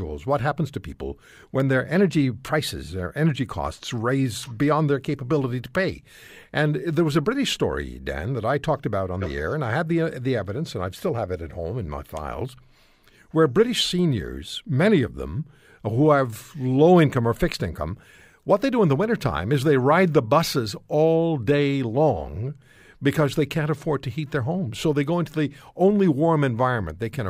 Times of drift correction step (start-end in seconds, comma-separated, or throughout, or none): 1.96-2.88